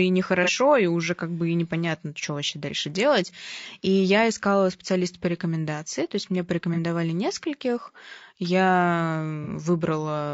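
Throughout the speech there is a rough, grainy texture, with noise filling the gaps between harmonics and a thin, synthetic top band. This is most likely low-delay AAC compression (AAC-ELD), at a rate that sounds close to 32 kbps. Unlike broadband hiss, the grain moves with the voice.

At 0.44, 6.74 and 9.44 s, AAC frame loss with concealment leaves brief smeared, phasey patches of about 50 ms. Each fits one lost frame that the decoder rebuilt from the previous spectrum. They are noisy fills rather than silent dropouts or sharp clicks.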